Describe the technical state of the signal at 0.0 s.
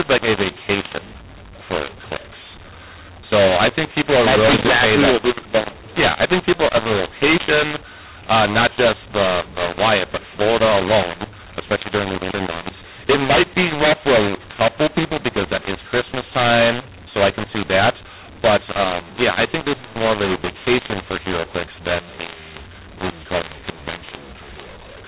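Right from 0.0 s, and for the whole clip, you've got mu-law and A-law mixed up: A-law telephone speech decoded as mu-law scrambles the levels, so it sounds harsh and distorted, with noise filling the pauses.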